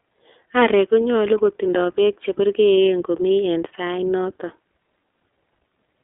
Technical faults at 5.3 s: iLBC codec

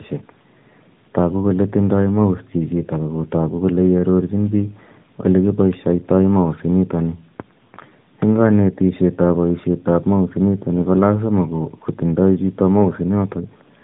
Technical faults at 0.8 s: tandem speech coding

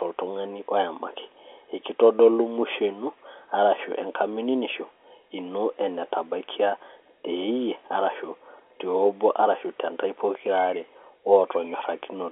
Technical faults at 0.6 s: none

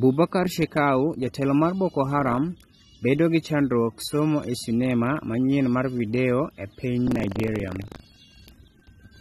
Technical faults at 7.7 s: AAC compression; buffer tearing

